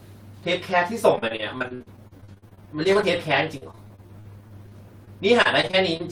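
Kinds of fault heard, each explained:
Repeated packet loss (robotic sound): the speech keeps dropping short chunks, some up to about 56 ms, and each hole gets patched by stretching the last bit of sound. That gives a choppy feel from 1.15 to 3.19 s and again, a bit lighter, from 3.57 to 6.01 s.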